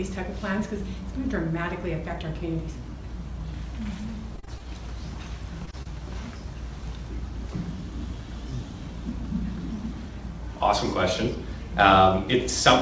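Repeated packet loss (robotic sound) runs from 4.36 to 4.61 s. Four separate gaps, the longest 32 ms, arrive in quick succession. Each is patched by extending the preceding sound, so about 30 percent of that stretch is synthetic, producing a choppy texture with fragments missing.

Short concealed packet loss follows at 5.65–5.69 s, 5.71–5.75 s and 5.83–5.87 s. Each time, roughly 20 ms failed to reach the decoder in time. The receiver bridged it by continuing the last sound, then blended back into the real audio, which leaves brief smears or wobbles in a band already capped at 8 kHz by the wideband call codec.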